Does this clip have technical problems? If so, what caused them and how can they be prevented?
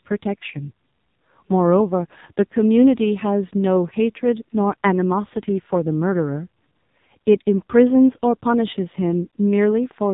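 Yes. An AMR narrowband mobile codec affects the speech throughout. Nothing passes above about 3.8 kHz, and heavy coding damage makes it sound buzzy and synthetic, which fits a low mode near 5.9 kbps. A spectrogram shows a flat ceiling with blank space above. Prevent it by capturing the audio directly or using a wideband codec at a higher bitrate.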